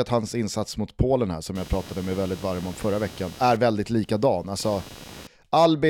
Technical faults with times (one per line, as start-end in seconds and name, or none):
1.55-5.27 computer activity noise